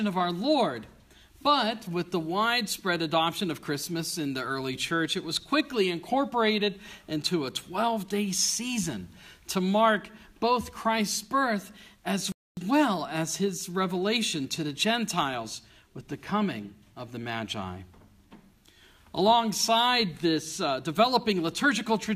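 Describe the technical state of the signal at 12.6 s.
At 12.6 s the signal is just recovering from a playback stall. The sound cut out at 12.32 s and stayed silent until 12.57 s, about 0.25 s. The player likely ran out of data or was blocked. The audio then resumes.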